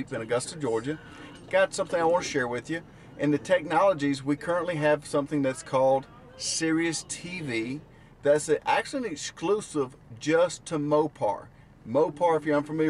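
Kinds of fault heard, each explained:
No technical fault can be heard anywhere in this audio. Nothing in it breaks, drops out or distorts at any point.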